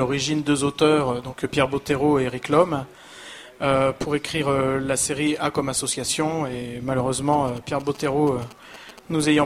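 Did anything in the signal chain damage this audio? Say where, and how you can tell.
Yes: GSM signalling bursts reach the analogue wiring from 7.33 to 8.99 s, a galloping 217 Hz buzz about 20 dB down, rectified radio pulses, not steady mains hum.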